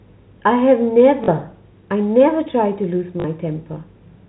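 Speech carried over a G.711 telephone-band path, with packet loss with last packet repeated at 1.24 s and 3.20 s. The receiver replays the previous packet to fill each 40 ms gap, producing a short buzzy stutter, which fits two lost 20 ms packets.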